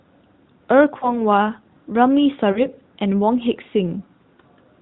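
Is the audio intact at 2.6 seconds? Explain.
No. At 2.6 seconds the audio falls inside a burst of lost AMR speech frames, running from about 2.52 to 2.62 s. About 40 ms of speech is missing, which fits two dropped 20 ms frames. The frames failed their error check, so the decoder patched the gap. It repeated the last good pitch and vocal tract settings while lowering the gain. The result is a short, drawn-out fade before the speech comes back weak or rough for a moment.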